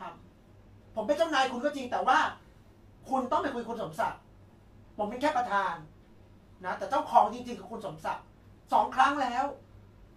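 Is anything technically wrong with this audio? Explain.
No, nothing is technically wrong with this audio.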